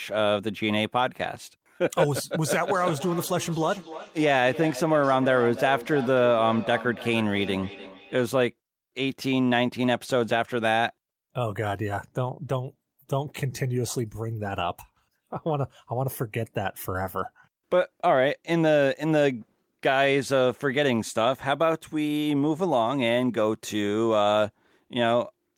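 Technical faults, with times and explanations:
2.5–8.36 s, feedback echo between two devices: the speech returns in distinct repeats about 0.3 s apart, each thinner and more ringing, the loudest about 13 dB below the speech. A second device nearby plays it back into a microphone whose echo canceller cannot remove it, so unlike room reverberation the repeats are evenly spaced and separate.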